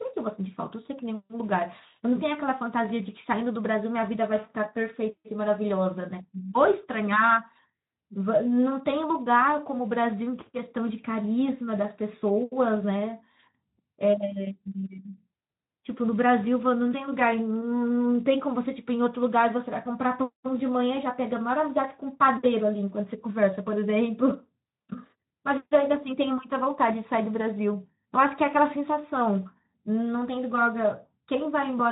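No faults to report; the speech runs through a Speex path whose band stops near 3.8 kHz, as expected for that codec.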